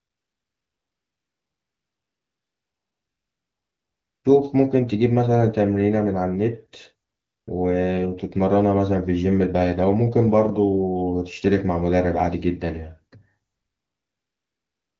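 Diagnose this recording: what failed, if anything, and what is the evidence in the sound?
The failure is AMR comfort noise, in the codec's silence handling. From 0.0 to 4.23 s, 7.09 to 7.47 s and 13.51 s to the end, the real background gives way to a smooth, steady hiss. The phone stopped sending speech frames during those pauses, and the receiver synthesised noise from a rough level-and-spectrum sketch.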